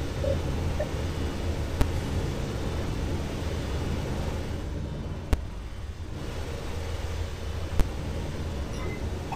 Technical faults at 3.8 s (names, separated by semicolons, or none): none